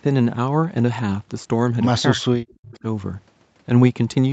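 From 2.13 to 2.85 s the speech is pulled down in pieces, roughly half a second in all, dipping as far as about 40 dB. This is most likely speech suppressed in double talk. The echo canceller mistook the talker for echo while both sides spoke. The waveform shows gouged, near-silent gaps, and the spectrogram shows energy vanishing in vertical bands.

At 2.74 to 2.79 s a faint scrap of delayed voice slips through, about 30 dB below the speech and arriving 0.3 s late. This is an echo leak, likely from loudspeaker pickup that the echo canceller left behind. It appears as a weak smear inside the suppressed stretch.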